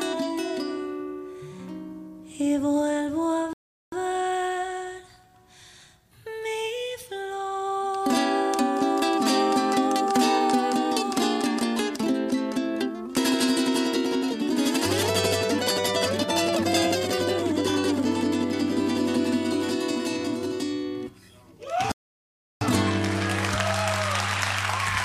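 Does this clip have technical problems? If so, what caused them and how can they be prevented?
Yes. A rebuffering stall occurs at 3.53 to 3.92 s and again at 21.92 to 22.61 s. Playback drained its store of downloaded audio, fell silent, and picked up exactly where it had stopped once more data arrived. Nothing is skipped, but the gaps add about 0.39 s and 0.69 s. Prevention: buffer more audio before starting and use adaptive bitrate streaming so delivery keeps ahead of playback on a slow connection.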